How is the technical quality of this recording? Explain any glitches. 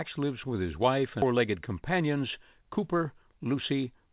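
Two glitches stand out in this speech recording: a sudden jump forward and a stretch of hurried delivery after it. The audio also passed through a G.711 mu-law call codec, which leaves nothing above 4 kHz.

At 1.22 to 1.24 s there is a skip ahead. Roughly 0.7 s of speech was discarded while later audio was already queued, and the two sides are spliced almost directly, with no fill. Unlike a dropout or packet loss concealment, there is no silence, buzz or smeared stretch to mark the spot. The speech simply lurches forward, and part of what was said is missing.

From 1.32 to 3.74 s a jitter buffer speed-up follows. The receiver was holding more audio than it wanted and trimmed short pitch-period pieces over and over, about 200 ms in total. Delivery runs about 7% fast and sounds rushed. The pitch stays where it was, which separates this from a sample-rate or playback-speed error, where faster speech would also sound higher.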